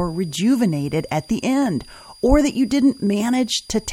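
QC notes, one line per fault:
Throughout: switching supply whistle, a faint tone drifting between 4.76 and 4.85 kHz, roughly 30 dB below the speech, visible as a thin, wavering spectrogram line.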